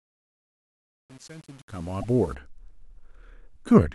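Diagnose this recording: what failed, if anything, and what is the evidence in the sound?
A digital gain stage applied the fade-in at too low a resolution and without dither, which fits an 8-bit word length. This is truncation distortion on a fade. From 0.0 s to about 2.13 s, while the speech is very quiet, the waveform collapses into a few coarse steps, so the sound is gritty. The rise into normal level completes at 2.35 s, where the fade-in ends.

The compressed stream carries damaged data between 2.0 and 2.04 s, so this fault sits in the codec or storage stage. The decoder could not correctly read one or more frames in that stretch, lost sync and had to find the next valid frame header. The result is a short chirp or blip of about 44 ms, landing just before the gritty fade-in ends. It does not sound like the speech around it.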